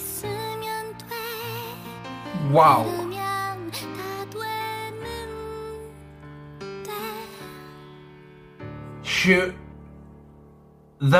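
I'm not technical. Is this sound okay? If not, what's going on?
Yes, nothing stood out as wrong when listening to this recording.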